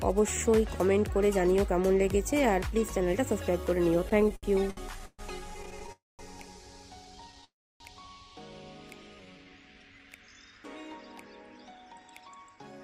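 From 4.09 to 5.9 s the audio stutters. These are repeated stalls. Packets kept arriving late, so the jitter buffer ran dry thirteen times. Each stall stretches the last sound for up to 130 ms, about 364 ms in all. Nothing is lost, but the sound drags.

Two call audio freezes follow, at 5.92 to 6.21 s and 7.44 to 7.82 s. The sound holds and fades, then drops to silence for about 180 ms and 290 ms. The likely cause is packets held up in transit. The audio resumes where it stopped, now 268 ms and 358 ms later.

From 8.91 to 10.18 s a jitter buffer slow-down plays the audio at 85% speed. Pitch stays the same. The receiver repeated single pitch periods to rebuild its reserve. This adds 193 ms, and sounds are drawn out.

From 11.5 to 12.8 s a jitter buffer speed-up runs the audio at 113% speed, again at unchanged pitch. The buffer held too much. Short pitch-period pieces were cut, around 150 ms in total, and the sound comes across hurried.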